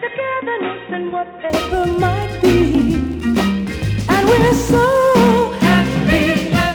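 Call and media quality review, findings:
Dull, boxy sound from 0.0 to 1.5 s: nothing above 3.8 kHz, level roughly 10 dB lower, added background noise around 30 dB under the signal, no gap at the change. Likely input switched to a poorer device: narrowband capture path with its own tone, gain and noise floor, then full band returns.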